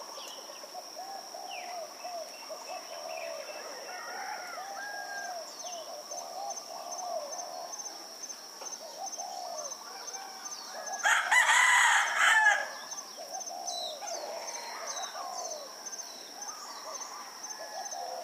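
There are no technical faults to describe in this recording of sounds.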